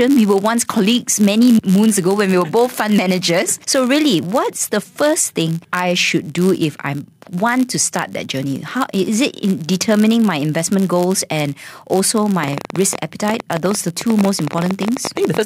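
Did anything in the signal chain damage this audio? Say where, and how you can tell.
Yes. A block size mismatch (padded) runs throughout, at the driver or buffer stage: a steady buzz at about 91.5 Hz marks the block rate. Each block arrives slightly short and is zero-filled, so this speech plays about 0.4% slow (0.996x) at essentially normal pitch.

A train of clicks runs from 12.44 s to the end, at about 12.8 per second with irregular spacing and peaks roughly 10 dB above the signal. The similar popping, audible in pauses too, likely comes from interference in the analogue wiring or a faulty connection or power supply.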